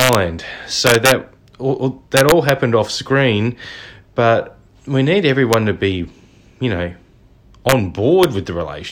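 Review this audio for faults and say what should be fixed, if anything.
Integer overflow cracks occur at 0.00–0.15 s, 0.87–1.12 s, 2.17–2.49 s (just before "off screen but we"), 5.53 s (between "screen but we need" and "to be you know"), 7.69–7.72 s and 8.23 s. On each loud peak the summed or gained speech signal exceeds the integer limit by up to about 3 dB and wraps to the opposite extreme instead of holding at full scale. The result is harsh full-range cracks, far sharper than clipping. To prevent it, use saturating arithmetic or a wider accumulator, and limit the gain before converting back to fixed point.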